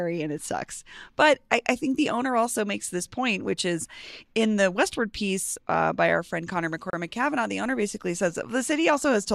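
A gap at a join of encoded pieces opens at 6.90 s and lasts about 31 ms, to 6.93 s. Two separately encoded sections were spliced without trimming the encoder's start delay and end padding, so the speech drops briefly into silence with smeared edges, then resumes where it left off.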